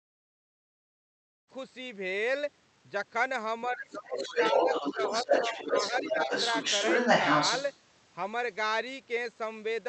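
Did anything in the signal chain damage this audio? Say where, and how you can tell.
Yes, at the call-processing stage. The speech suppressed in double talk shows up as dips from 3.68 to 4.71 s (deepest roughly 20 dB, about 0.7 s in total), a brief 5 dB notch at 4.94 s, and dips between 5.24 and 6.3 s (about 10 dB, roughly half a second). These dips happen while the far side is playing on the loudspeaker, so the likely cause is an echo canceller ducking the near talker. On a waveform the envelope pinches inward. A spectrogram shows the harmonic stack fading in vertical gaps.

The other side's voice leaking through runs from 4.14 to 7.79 s. A second voice sits alongside the talker's speech at about 5 dB above it. It is the likely residue of loudspeaker echo that the canceller failed to remove from the microphone. On a spectrogram a second, unrelated harmonic pattern overlaps the main one. 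On a waveform it fills the pauses that would otherwise drop toward silence. All of this sits inside the Opus call path, whose top end stops near 8 kHz.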